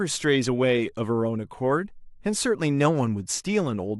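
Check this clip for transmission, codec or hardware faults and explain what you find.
No technical faults are audible in the speech; the signal stays continuous and intact throughout.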